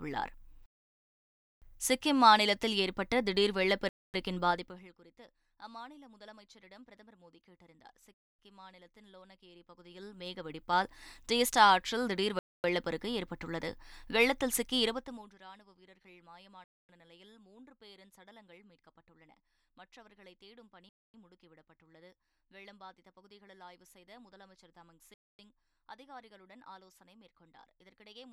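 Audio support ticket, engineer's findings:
Gap between chunks: 250 ms hard-edged dropouts at 3.89, 8.14, 12.39, 16.64, 20.89 and 25.14 s, one after every 4 s of audio. Probable component: chunked transport or playback scheduler. Waveform shows flat silent blocks; spectrogram shows clean vertical blank bands.

Zipper noise: ticking under gain moves at 4.49–4.97 s (down about 25 dB, roughly 30 steps/s), 9.5–10.9 s (up about 25 dB, roughly 10 steps/s), 14.83–15.39 s (down, roughly 20 steps/s). Unsmoothed 2 dB gain steps. Waveform envelope staircases; spectrogram shows faint broadband vertical ticks.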